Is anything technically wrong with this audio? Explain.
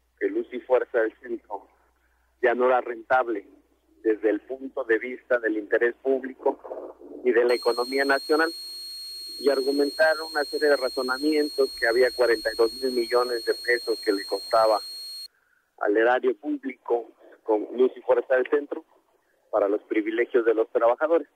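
Yes, there's a switching supply whistle from 7.49 to 15.26 s: a thin, high tone drifting between about 4.23 and 4.33 kHz, some 15 dB under the audio. A switch-mode supply is running in an audible burst mode or beating with another one, and its pitch shifts as the load changes.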